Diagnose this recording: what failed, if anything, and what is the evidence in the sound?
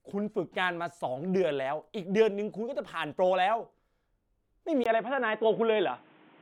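The input device changed at 4.84 s, and the recording stays on the poorer device to the end. The fault sits at the capture stage, where the operating system or driver picks the input. A gap of about 20 ms marks the switch. After it, the speech turns dull and boxy, with nothing above 3.8 kHz. A new noise floor appears, roughly 30 dB under the speech. Loudness barely changes. The cause is likely a fallback to a narrowband headset or secondary microphone.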